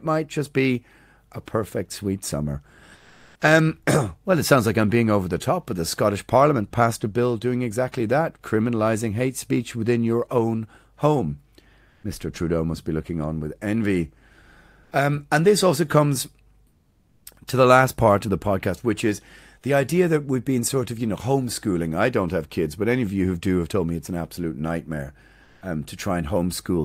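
In this speech clip, comfort noise replaces the background in five pauses: 2.95 to 3.41 s, 11.89 to 12.03 s, 14.83 to 14.91 s, 16.67 to 17.25 s, and 25.43 to 25.61 s. The real room sound drops out. A steady, featureless hiss fills the gap instead. It sits about 2 dB quieter in the first and fourth gaps, about 2 dB louder in the second and third, and level in the last. The likely cause is discontinuous transmission, as in Opus DTX.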